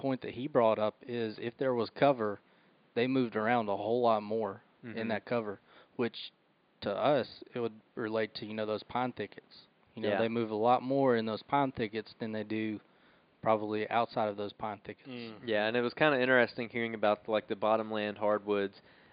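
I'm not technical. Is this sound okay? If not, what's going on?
Yes, the recording is technically sound, with only a faint background noise from the room that sits well below the speech.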